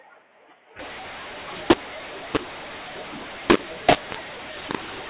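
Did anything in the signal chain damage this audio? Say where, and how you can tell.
Yes. From 0.79 s to the end the speech turns harsh and gritty, with loudness jumping unevenly and pauses filling with hiss. That is mu-law and A-law mixed up at the codec stage: the 8 kHz G.711 stream was encoded as A-law but decoded as mu-law, so every level lands wrong.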